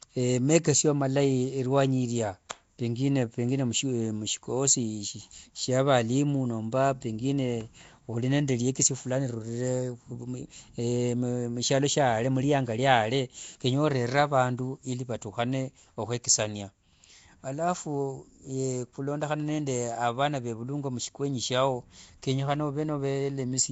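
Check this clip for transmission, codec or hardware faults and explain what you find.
Two faults are audible in this speech clip: codec damage running through the whole recording, and one brief pre-echo.

Throughout, the speech has a rough, hissy halo and a smeared, underwater quality, most likely from Nellymoser compression, which fits a low fixed rate around 32 kbps. Starved bands are filled with noise instead of detail. On a spectrogram, energy stops sharply at 7.7 kHz, with grainy noise patches where harmonics should be.

At 2.49 s, a pre-echo spreads about 12 ms of hiss ahead of a sharp attack. Because the codec spread its quantisation noise across the whole block, the quiet moment before the onset is filled too, so the attack sounds soft. The waveform shows low fuzz just before the transient.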